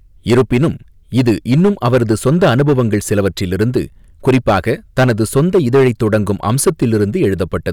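Hard clipping runs through the whole speech clip: the signal is driven about 12 dB past what the chain can pass, so roughly one sample in twenty is sheared flat. Loud syllables turn harshly fuzzy, the waveform shows squared-off tops, and the spectrogram shows harmonics smeared far upward.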